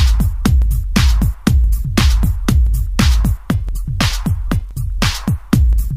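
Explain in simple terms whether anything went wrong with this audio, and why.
Something did go wrong: periodic USB or driver dropouts. From 0.62 s to 5.73 s, about every 1.02 s, a tiny slice of sound, roughly two thousandths of a second, is skipped, leaving a tick. Random crackle would be irregular; these ticks keep a steady beat.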